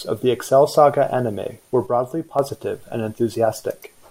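Right after "anime were", at 1.87 s, the speech suddenly drops by about 6 dB and stays down until 2.39 s, roughly half a second, then jumps back up. That abrupt step is most likely one channel dropping out: with one side of the stereo pair gone, the mono sum keeps only half of the shared signal, and anything that lived only in the lost channel vanishes too.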